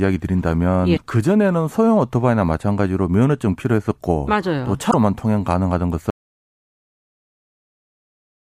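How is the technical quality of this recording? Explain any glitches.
The recording has real problems: two short glitches from damaged data in a compressed stream, and then the audio drops out completely before the end.

The damaged data shows up at 0.93 to 0.99 s and again at 4.87 to 4.94 s. Corrupted bytes in the compressed stream throw the decoder off, so it loses sync and hunts for the next valid frame. You hear a quick glitch.

At 6.10 s the speech cuts out mid-flow and stays gone to the end. That's an audio dropout to silence: dead silence with no room tone at all. The likely cause is a lost input, such as a disconnected device or a failed link, while recording carried on.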